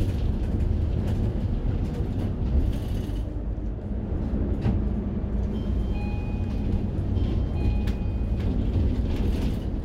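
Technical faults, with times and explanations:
No technical faults are audible anywhere in this recording of sounds.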